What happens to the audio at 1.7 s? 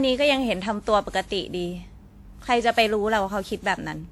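At 1.7 s the speech has a swirly, smeared, hollow quality, with consonant attacks blurred, and this runs through the whole clip rather than starting there. It is likely generation loss: the signal appears to have been run through a lossy codec around ten times, each pass quantising on a shifted frame grid so noise accumulates. The character points to WMA 1 at about 96 kbit/s, with content reaching up to about 20.1 kHz.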